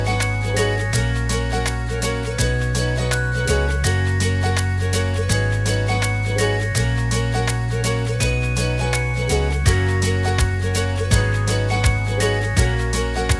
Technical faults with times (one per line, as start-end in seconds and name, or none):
none